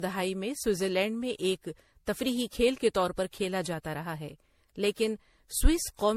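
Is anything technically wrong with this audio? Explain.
Yes, the whole clip shows generation loss. Across the full length the speech sounds swirly and hollow, with consonant attacks smeared, and there's nothing above about 16.3 kHz. That's more damage than a single encode would leave; it likely went through a lossy codec around seven times, each pass requantising on a shifted frame grid so the noise and spectral holes pile up. The character points to repeated MP3 at something like 64 kbit/s.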